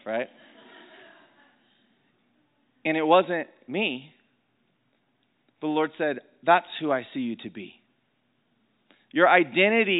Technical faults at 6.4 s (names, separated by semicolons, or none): none